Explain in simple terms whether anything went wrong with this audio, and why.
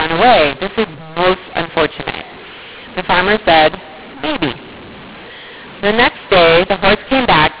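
Mu-law and A-law are mixed up, and it lasts from start to finish. The speech was stored with the telephone mu-law scheme but played back as A-law, a different way of coding loudness. Every sound level gets translated wrongly: some too loud, some too soft, and near-silent moments turn into noise. That's why the speech sounds harsh and distorted throughout, and the pauses hiss. The narrow, muffled telephone sound itself is expected from G.711 coding.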